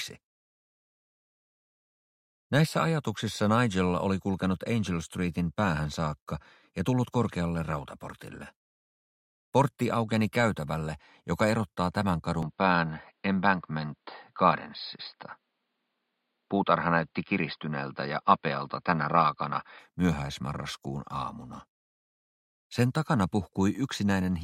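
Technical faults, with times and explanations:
12.43–19.79 s, input switched to a poorer device: the sound abruptly turns duller and boxier, with nothing above about 5.1 kHz, then regains its full top end at 19.79 s. Neither switch has a gap, and the level barely changes, but a faint new background noise, well below the signal, comes in with the narrower band. The cause is likely a mid-recording change to a lower-bandwidth input, such as another microphone or a headset call profile.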